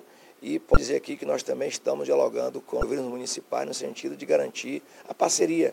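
At 0.73 s and again at 2.80 s, each lasting about 34 ms, the audio is broken by damaged data in a compressed stream: corrupted bytes reach the decoder, which misreads those frames, loses sync and hunts for the next valid frame header. Each event is heard as a brief chirp, squawk, click or short hole.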